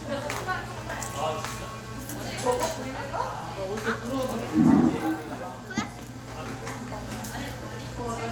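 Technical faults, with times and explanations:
Nothing in this recording of sounds stands out as a technical problem.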